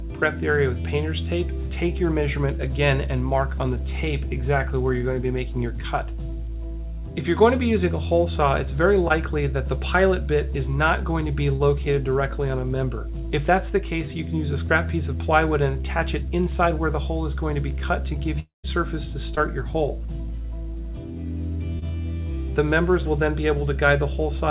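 At 9.08 to 9.12 s and 11.56 to 11.62 s, short concealed packet loss leaves brief smears. Late packets were patched by extending the preceding sound.

From 18.40 to 18.66 s, a long network dropout is likely. The sound stretches into a fading buzz, then goes quiet before returning with a piece missing.

More short concealed packet loss follows at 19.36 to 19.39 s and 21.79 to 21.83 s, each a quick wobble. The narrow call band, with nothing above 4 kHz, fits a G.711 codec.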